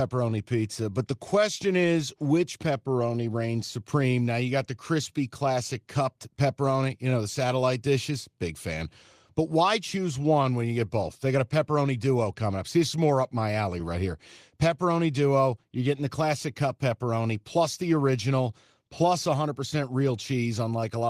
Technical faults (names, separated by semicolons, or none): none